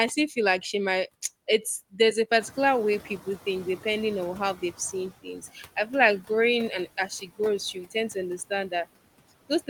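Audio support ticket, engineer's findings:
Noise suppressor artifacts, whole clip: residual background pumps between phrases, about 17 dB removed. Steady gating texture, unlike a one-off lag. Component: noise suppressor spectral gain.

Noise suppressor catching up, 2.4–5.09 s: background jumps around 2.5 s (room noise rising about 14 dB), passes through under-reduced, then settles over roughly 2.7 s to about 11 dB cut. Estimate lag, not permanent leakage.

Speech cut by the noise suppressor, 5.23–5.57 s and 6.86–7.4 s: about a tenth of a second of speech swallowed each time, dropping about 12 dB and about 8 dB. Speech itself dips along with the background.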